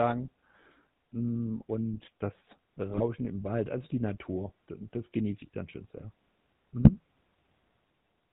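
Throughout, the speech carries the GSM full-rate codec's buzzy, gravelly roughness with nothing above 4 kHz, which fits 13 kbps coding; unlike plain band-limiting, it adds grit. Just after "und das", at 2.9 to 3.01 s, and again at 6.8 to 6.9 s, GSM bit errors corrupt decoder parameters, producing brief squawks and gargling bursts rather than clean dropouts or silence.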